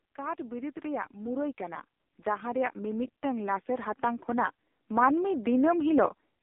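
Throughout, AMR narrowband mobile codec damage is heavy: nothing above 3.6 kHz, a thin 250 Hz to 3.6 kHz band, and buzzy, synthetic speech consistent with a low bitrate near 5.15 kbps.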